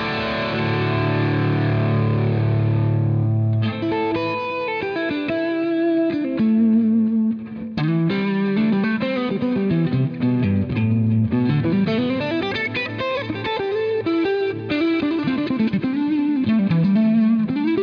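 Nothing in the audio stood out as a technical fault on listening.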